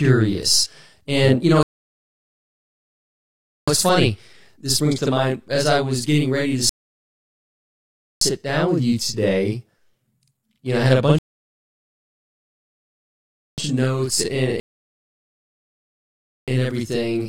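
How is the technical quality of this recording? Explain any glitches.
The recording has two clear technical problems: a constant doubling of the speech and four dropouts into silence.

Channel delay (doubling) runs through the whole clip. Every syllable is followed by a same-level copy about 46 ms later, giving a hollow, double-tracked slap. One channel is arriving late, by an amount that fits a 2048-sample buffer, and when the two are summed to mono the late copy sits beside the original as a distinct echo.

Rebuffering stalls cut the speech to silence four times, and each time it resumes exactly where it stopped. The first runs from 1.63 to 3.68 s, after "you know", adding about 2.05 s. The second runs from 6.69 to 8.21 s, between "was getting ready to" and "down with you today", adding 1.52 s. The third runs from 11.19 to 13.58 s, adding 2.39 s. The fourth runs from 14.6 to 16.48 s, after "of notes and", adding 1.88 s. 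The player exhausted its downloaded audio and waited for more, so nothing is lost but time.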